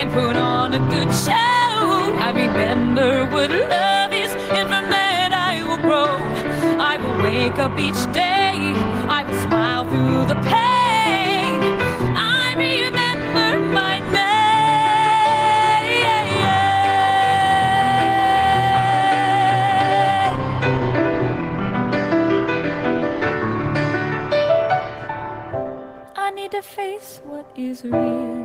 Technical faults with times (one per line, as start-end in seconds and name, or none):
0.00-28.44 gain pumping